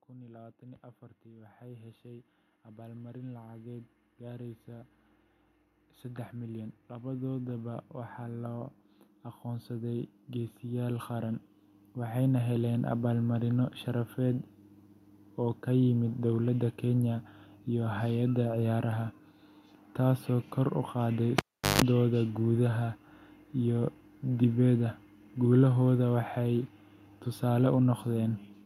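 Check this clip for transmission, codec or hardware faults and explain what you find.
Two hardware faults are present in this speech clip: a slow gain ramp from an automatic level control and a brief cable disconnection.

From 0.07 s to 14.15 s there is automatic gain rising. The control judged the input too quiet and kept lifting its gain, about 22 dB in total, so voice and room background swell together steadily over those fourteen seconds.

At 21.38 s, just after "taasoo kor u qaaday", comes a cable pulled and plugged in. A pop drops the signal to near silence for about 382 ms, including 155 ms of 50 Hz mains buzz as only the tip makes contact, and a second pop as the sound returns at 21.82 s.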